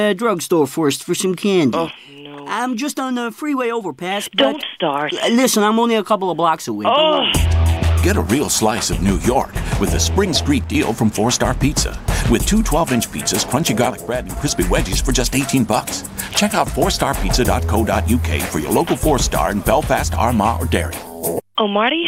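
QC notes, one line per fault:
1.91–4.31 s, one channel drops out: the level falls abruptly by about 6 dB for 2.4 s, then snaps back. The likely cause is one stereo channel going silent. Summed to mono, the shared material loses half its contribution, and anything carried only by that channel vanishes.
10.64–10.75 s, one channel drops out: the same sudden 6 dB dip, lasting only about 110 ms.
13.90–14.37 s, one channel drops out: a 0.47 s dip of about 6 dB, again abrupt at both edges.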